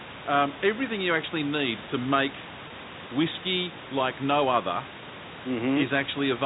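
At 2.68 to 2.70 s, between "actually need to make" and "whiskey like no other", packet loss with pitch repetition fills a 20 ms gap by repeating the last pitch period, giving a brief buzzy hold rather than a silent dropout or click.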